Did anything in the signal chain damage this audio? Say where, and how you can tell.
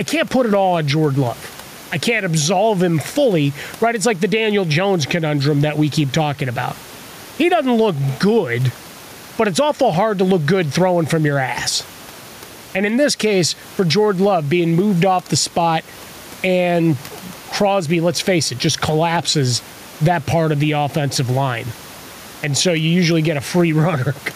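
Yes, there is gain pumping through the whole clip. The room noise sits about 30 dB below the speech, and the gain swings by around 10 dB. The likely cause is input gain set far too high, with a fast limiter pulling it down.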